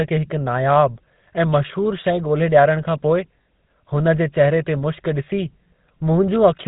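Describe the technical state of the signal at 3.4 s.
At 3.43 to 3.46 s the speech breaks into lost GSM frames. For about 40 ms, consistent with two 20 ms frames, the decoder has no valid data and replays the last good frame's vocal-tract and pitch settings. The gap is heard as a brief rough, metallic ring instead of silence. On a spectrogram the preceding spectral pattern is frozen and smeared across the gap. In the waveform, a repetitive stretch replaces the natural speech movement.

Around that moment, and throughout, the audio carries the GSM full-rate codec's signature. The vocal tract is modelled by a filter driven by regularly spaced pulses, with only every third excitation sample kept. The result is plainly audible buzzy, gravelly roughness. A spectrogram shows a hard ceiling at 4 kHz with nothing above it, and harmonics look coarse and grainy rather than clean. The waveform appears jagged and pulse-like in voiced stretches.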